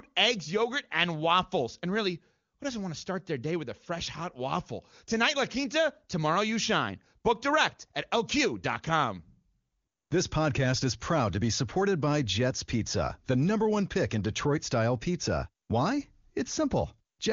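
Nothing goes wrong here: the speech comes through the AMR wideband (HD Voice) codec without any technical faults to point to.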